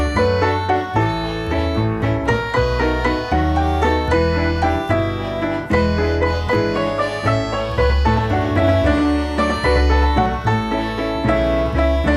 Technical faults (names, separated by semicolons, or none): doubled audio track